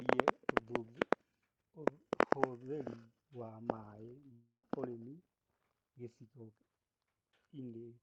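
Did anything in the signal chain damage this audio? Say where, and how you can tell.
Yes. The network stage damaged this speech. A long network dropout runs from 4.32 to 4.64 s. The sound there doesn't stop cleanly. The last audio is stretched into a buzzy, fading tail for roughly 0.3 s. It then falls to near silence for about 0.11 s before speech resumes. About 310 ms of the original never arrives. The receiver's concealment papered over the gap. The likely cause is a run of lost packets.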